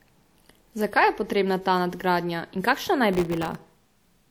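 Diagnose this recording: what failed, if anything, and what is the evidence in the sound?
Processor overload crackle at the driver or buffer stage, from 3.13 to 3.70 s: a gritty crackle tears across the speech. Dozens of very short buffers, each under a millisecond, missed their deadlines and left hard-edged silent gaps. Unlike a single dropout, these gaps cluster into a burst that stops once the load passes.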